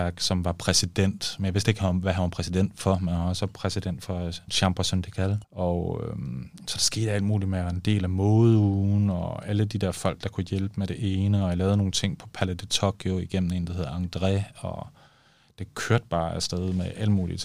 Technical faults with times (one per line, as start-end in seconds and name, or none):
none